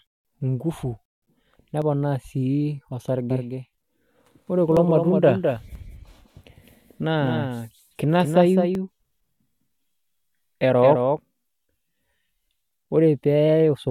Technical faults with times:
1.82 overlap between stream segments
2.78 overlap between stream segments
3.30-11.18 doubled audio track
3.78 overlap between stream segments
4.77 overlap between stream segments
5.75 overlap between stream segments
8.75 overlap between stream segments

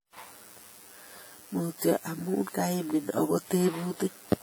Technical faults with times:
0.00-4.43 channel delay (comb filtering)
0.00-4.43 low-bitrate audio saved at a high bitrate

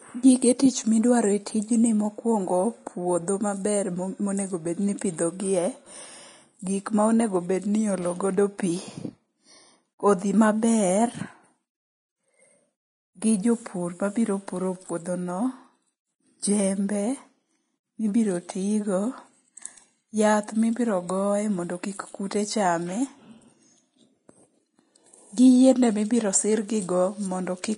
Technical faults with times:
0.00-27.78 Vorbis compression

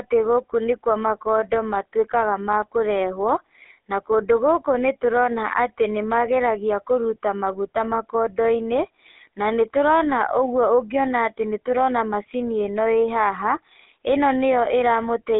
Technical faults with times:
0.00-15.39 GSM full-rate codec

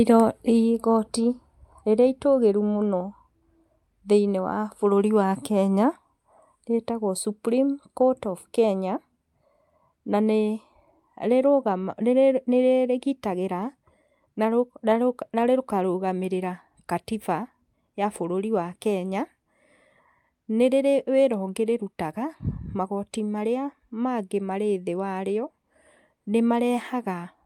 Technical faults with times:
none

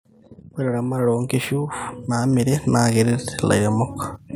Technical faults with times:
0.56-3.84 automatic gain rising

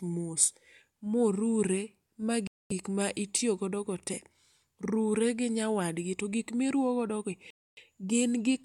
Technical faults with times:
2.47-2.72 Bluetooth stall
7.50-7.78 Bluetooth stall

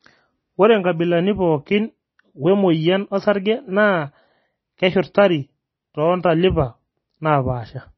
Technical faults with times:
0.00-7.98 MP3 compression

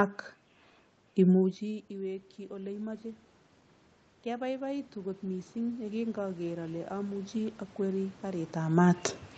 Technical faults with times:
1.58-3.11 automatic gain rising
4.23-8.60 automatic gain rising

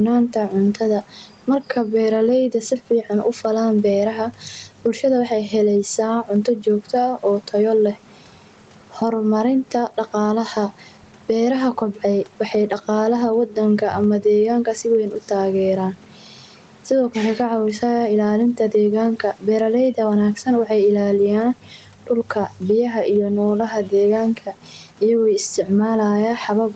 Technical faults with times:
0.00-26.76 gain pumping

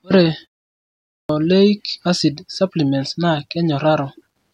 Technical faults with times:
0.86-1.29 clipped start after a pause

